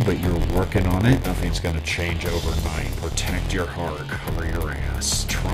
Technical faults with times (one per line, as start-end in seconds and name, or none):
0.00-5.54 block size mismatch (padded)